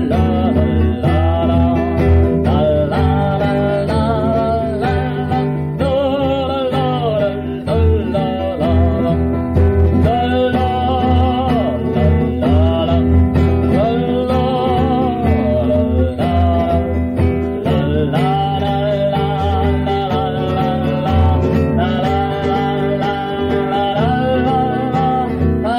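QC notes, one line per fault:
throughout, hard clipping: brief crackle and grit on the loudest peaks, with quieter passages clean. The level runs about 3 dB past what the chain can pass, so roughly half a percent of samples are squared off flat, adding high harmonics.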